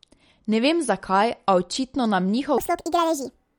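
It's a short speech clip with two problems. Throughout, there's a hard ceiling on the treble, and the codec damage is plainly audible: that watery, swirly quality where quiet detail flickers in and out between frames, plus smeared consonant attacks. That's likely MP3 compression, and the amount of damage fits a low bitrate around 48 kbps, starved enough that the encoder drops the top end and zeroes weak frequency lines. Then, from 2.58 s to the end, the speech suddenly jumps up and rushes. That's a section at the wrong speed, running about 1.66 times too fast, so the pitch rises by roughly ten semitones along with the tempo. Speed and pitch shift together like that when a chunk is likely played back against the wrong clock.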